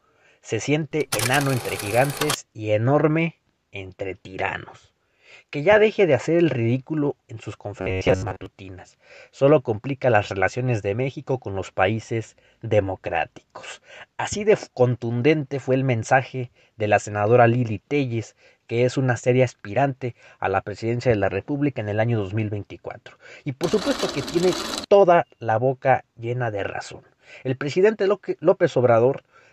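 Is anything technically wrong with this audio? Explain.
Yes. Robotic sound from repeated short buffers occurs from 7.81 to 8.46 s, where the audio collapses into a rigid, metallic buzz pitched at about 94 Hz that only loosely follows the underlying sound. The likely cause is audio arriving too slowly, with the software looping a fragment of roughly 10.7 ms to fill each gap. Each repeat forces that fixed pitch, and most of the actual material in this stretch is skipped rather than heard.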